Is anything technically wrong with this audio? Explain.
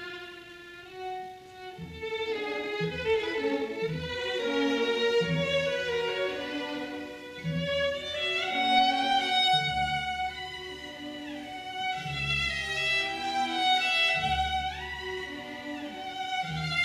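Yes. From 0 to 4.52 s there's a time-stretched section running at 1.96 times speed, likely software squeezing it to fit by dropping short pieces. It sounds rushed with the pitch unchanged, then the pace shifts abruptly at 4.52 s.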